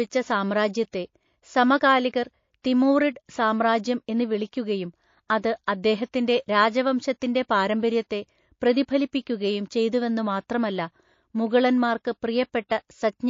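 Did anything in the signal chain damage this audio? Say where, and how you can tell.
Yes, at the codec stage, from start to finish: the speech sounds watery and swirly, and s sounds chirp metallically. That's likely MP3 compression at a low rate, around 32 kbps, starving weak frequency lines so they flicker between frames.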